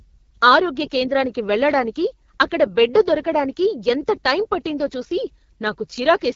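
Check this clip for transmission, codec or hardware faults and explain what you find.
One codec fault runs through the whole clip: AMR wideband (HD Voice) coding. From start to finish the speech has passed through AMR-WB at a rate that points to 8.85 kbit/s, one of its lowest modes. At that rate the pulse-driven vocal tract model has too few bits, so the speech comes out plainly rough and raspy. Nothing reaches above 7.4 kHz, and the top band is filled with shaped noise rather than real detail.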